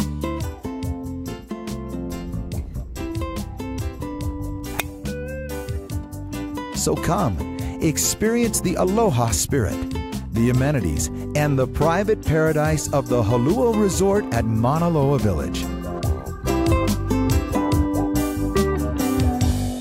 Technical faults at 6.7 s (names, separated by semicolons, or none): none